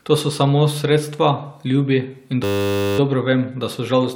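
From 2.44 to 2.99 s the speech gives way to a system hang loop: the machine stalled while the sound hardware kept replaying one 10 ms buffer, producing a steady 100 Hz buzz. A waveform shows identical repeating cycles; a spectrogram shows evenly spaced horizontal harmonic lines.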